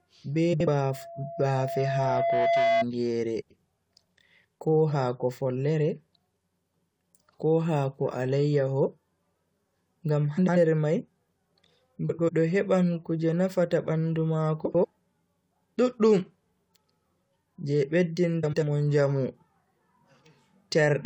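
A garbled flutter breaks the speech from 0.53 to 0.67 s. These are frames out of order: two neighbouring blocks of about 70 ms each swapped places and were decoded in that order, so the stretch plays with its halves exchanged and no time is lost.

From 0.90 to 2.85 s a steady 678 Hz tone swells over about two seconds into a loudspeaker feedback squeal, peaking about 5 dB above the speech. A microphone picked up the loudspeaker it was feeding, and at that frequency the loop gain exceeded one, so the tone kept growing on its own.

The same swapped-block flutter returns at 3.41 to 3.58 s, 10.37 to 10.57 s, 12.09 to 12.30 s just before "heban kuje nafata bandu", 14.65 to 14.85 s just after "heban kuje nafata bandu", and 18.43 to 18.63 s. Each time the exchanged blocks are about 93 ms long, which fits groups of four frames.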